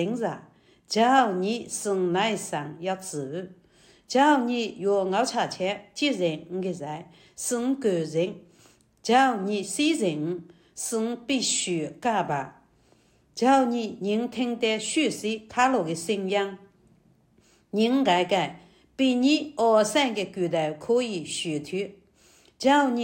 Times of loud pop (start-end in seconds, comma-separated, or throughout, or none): none